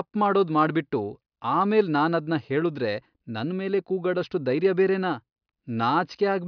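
No technical faults are audible.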